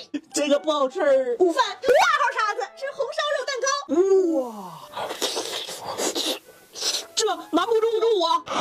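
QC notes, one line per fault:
4.15–8.13 s digital radio blending to analogue: the receiver lost the digital stream and cross-faded over 321 ms to FM, bringing up hiss roughly 30 dB down and dropping the level about 2 dB.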